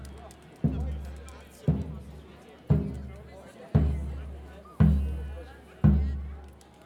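From start to end, the audio carries the signature of a resampler restarted on every block. The conversion, which points to 44.1 kHz being taken to 48 kHz, handled each 20 ms block in isolation, so every block boundary lacks its true neighbouring samples and picks up a small error. At 50 per second these merge into a buzz at 50 Hz that rides on the signal. A spectrogram shows faint vertical lines every 20 ms wherever there is signal, and the waveform shows small kinks at those boundaries.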